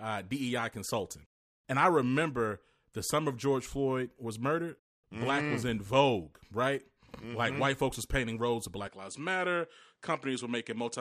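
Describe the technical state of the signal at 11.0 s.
Input switched to a poorer device from 8.87 s, after "was painting roads of": likely a different microphone, cutting everything above 10.5 kHz and adding faint new background noise.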